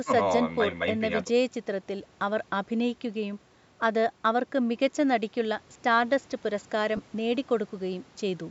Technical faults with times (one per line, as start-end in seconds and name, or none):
6.97-6.99 lost LE Audio frames